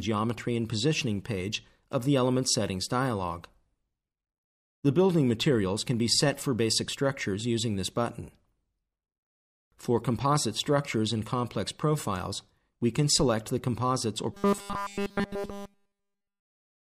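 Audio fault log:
14.32–16.98 s, robotic sound from repeated short buffers: the end of the clip collapses into a rigid metallic buzz at 200 Hz, with essentially all of it repeated. This is likely a short chunk of about 5 ms being looped because fresh audio wasn't arriving in time.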